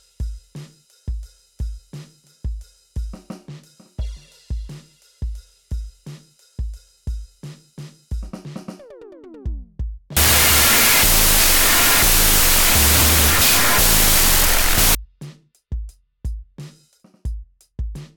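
Music plays until 10.17 s, when it collapses into loud, harsh noise with the original buried underneath, slowed to half speed and an octave low, until 14.95 s. It is a wrong sample width fault, consistent with 32-bit float data being read as 16-bit integers.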